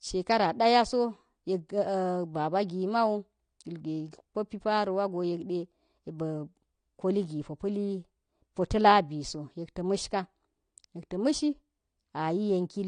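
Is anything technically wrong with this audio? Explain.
Yes. Throughout the speech, nothing sounds above about 9.7 kHz, and sibilants carry a fizzy, warbling smear, likely AAC compression at a low rate fitting 32 kbps, starving bands. Unlike plain low-pass filtering, the remaining spectrum itself sounds damaged.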